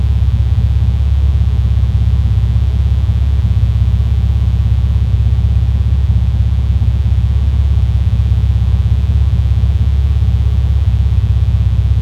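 Mains buzz runs from start to finish. It rests on a 60 Hz fundamental. Sharp switching spikes arrive twice per cycle, so harmonics climb into the kilohertz range. The result is a steady, raspy buzz, roughly 25 dB below the sound.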